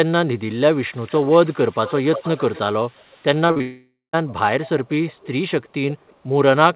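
From 0.91 to 2.59 s, a delayed copy of the speech trails it by 355 ms, fairly strong at roughly 15 dB down. This is likely an echo leak: a far-end loudspeaker feeding a microphone whose echo canceller missed it. A fainter trace follows from 2.85 to 3.24 s.

At 3.48 to 3.62 s, three short concealed packet losses in a row leave a brief smeared wobble. The receiver stretched the last sound over gaps of 20, 40 and 20 ms.

A long network dropout likely follows from 3.62 to 4.15 s. About half a second never arrived. A fading synthetic continuation fills it, ending in roughly 160 ms of silence before speech resumes with that part missing.

The echo leak returns at 4.63 to 4.90 s and 5.07 to 5.28 s, still 355 ms behind. Faint scraps follow at 5.63 to 5.69 s and 6.07 to 6.15 s. Throughout, nothing above 4 kHz is heard, which fits a narrowband telephone codec on the call path.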